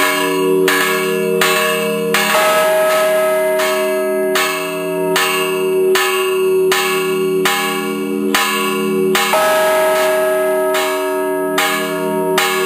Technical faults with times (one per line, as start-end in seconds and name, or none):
0.00-2.64 doubled audio track